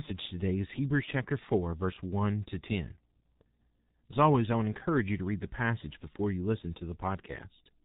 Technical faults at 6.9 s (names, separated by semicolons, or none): G.723.1 codec